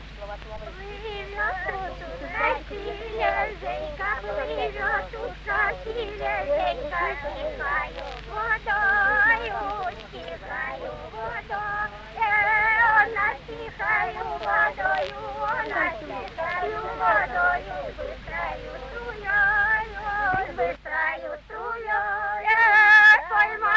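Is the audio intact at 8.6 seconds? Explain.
Yes, the audio is intact at 8.6 seconds, with no dropout, glitch or other fault at that moment.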